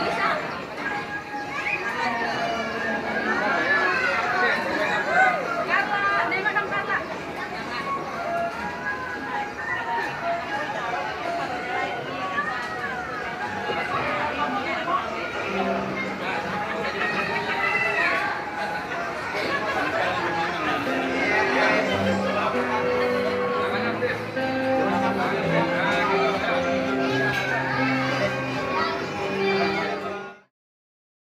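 Nothing in this audio is technically wrong. The level fades out smoothly over about a second near the end, reaching silence at 30.52 s with no click or hard edge.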